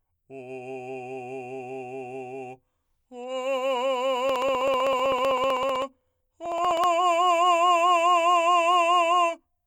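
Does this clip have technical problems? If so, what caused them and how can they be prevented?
Yes. This music has periodic USB or driver dropouts from 4.29 s to 6.84 s. Small regular ticks sound every 63.5 ms, about sixteen per second, roughly forty in all. Each tick is a tiny gap, around half a millisecond, where samples were skipped rather than filled with silence. A background task held up the USB bus or audio driver at a fixed interval, so the stream jumped forward each time. To prevent it, stop the offending background process and use a larger audio buffer.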